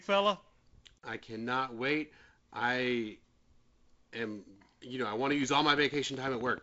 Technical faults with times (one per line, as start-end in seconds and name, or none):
5.32-6.59 train of clicks